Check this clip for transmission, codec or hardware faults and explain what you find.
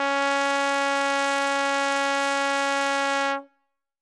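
One codec fault runs through the whole music clip: the sound likely passed through Bluetooth LC3 compression. Across all of it, nothing survives above 11.6 kHz, and the upper band that remains has a grainy, breathy noise texture in place of clean detail. The codec discards much of the high spectrum and fills it with shaped noise, and the plainly audible damage fits a bitrate around 48 kbps with 10 ms frames. A spectrogram shows a hard ceiling near 11.6 kHz and blurry, speckled energy beneath it.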